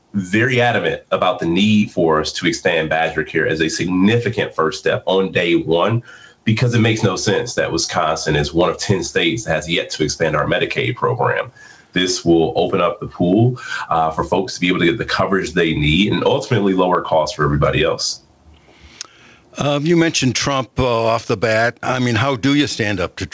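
Gain pumping runs through the whole clip: the gain ducks by around 10 dB under each loud sound, unlike a noise gate, which would silence the gaps. The likely cause is input gain set far too high, with a fast limiter clamping it. The call path's band limit, with nothing above 8 kHz, is a separate and expected trait.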